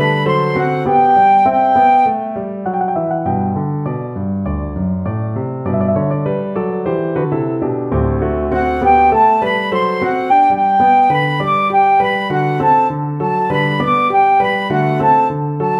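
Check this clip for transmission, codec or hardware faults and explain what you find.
There are compressed frames skipped in two places: at 7.20 to 7.25 s the audio jumps ahead by about 150 ms, and at 10.27 to 10.32 s by about 400 ms. Whole compressed frames, a few and then around ten, fitting a frame of roughly 46 ms, were never decoded. Unlike a dropout, there is no silent gap. The sound simply lurches forward.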